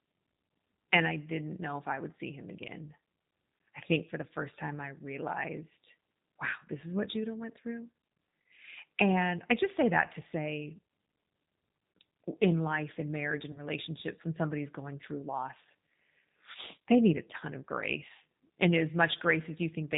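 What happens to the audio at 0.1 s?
At 0.1 s the speech is already carrying G.729 codec damage, which runs through the whole clip rather than starting at that point. The coder rebuilds each 10 ms frame from a vocal tract filter, a pitch predictor and a sparse set of pulses, and cuts everything above 4 kHz. The result is plainly audible: dull, band-limited speech with a rough, synthetic buzz, consistent with an 8 kbit/s coder.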